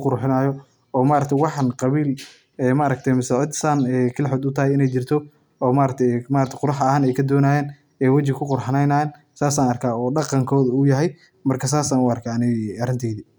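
No technical faults are audible.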